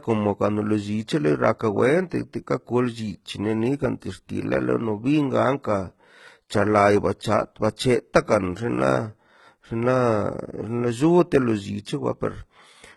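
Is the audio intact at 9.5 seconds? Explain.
No. At 9.5 seconds, as throughout the speech, the treble sounds synthetic: s sounds come out gritty, metallic and lispy, and nothing is present above about 11.8 kHz. This is likely heavy HE-AAC compression at a very low rate, consistent with roughly 16 kbps. Only the lower spectrum is truly coded. The upper bands are rebuilt by copying lower ones upward under a coarse envelope, so the harmonics no longer line up across the crossover.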